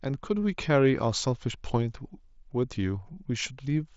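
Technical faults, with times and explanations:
No faults detected.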